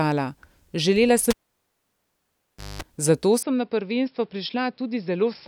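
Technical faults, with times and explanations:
1.30–2.82 s, cable pulled and plugged in: a pop, then about 1.47 s of near silence, a 0.21 s burst of 50 Hz mains buzz, and a second pop. A live cable was pulled out, and the buzz came as only the tip touched during reinsertion.
3.43–5.48 s, input switched to a poorer device: with no gap, the sound turns dull and boxy, drops about 5 dB, has nothing above 5.4 kHz, and gains a new noise floor roughly 40 dB down, likely from a change to a narrower-band microphone or headset.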